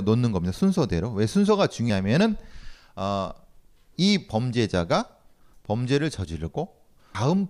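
At 1.9 s and again at 7.15 s, the speech skips. Around 300 ms of sound is gone each time, and the two sides butt together with no gap. This is likely audio missing between chunks, lost while a 2-second chunk closes and the next opens.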